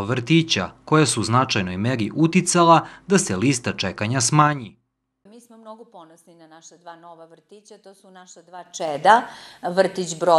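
Zipper noise at 4.39–4.82 s (a fall of about 25 dB) and 8.55–9.11 s (a similar rise). Unsmoothed 3 dB gain steps tick audibly, showing as staircased waveform envelopes and thin vertical spectrogram lines.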